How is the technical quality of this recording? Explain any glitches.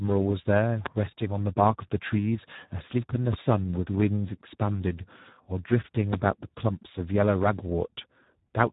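Technical quality is poor. Speex codec damage runs throughout the speech. At about 8 kbps the CELP coder has very little to spend on the excitation signal. The voice comes out noisy and hoarse. Nothing is left above 3.8 kHz, so the sound is also dull and narrowband.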